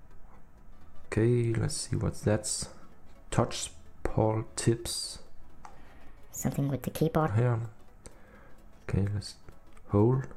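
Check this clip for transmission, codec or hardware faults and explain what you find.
One fault stands out: a section at the wrong speed, from 5.77 to 7.28 s. For those 1.5 seconds the audio runs 1.44 times faster than the rest, and its pitch rises by roughly seven semitones, so the passage sounds hurried and bright before dropping back to normal. The likely cause is an editor or player clocking that stretch at the wrong rate. Tempo and pitch jump together and then hold steady. A pitch-shift fault would leave the timing untouched, and wow or flutter would waver continuously rather than switch cleanly at both ends.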